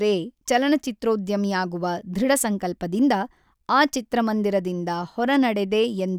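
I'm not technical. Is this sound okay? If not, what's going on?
Yes, no faults heard.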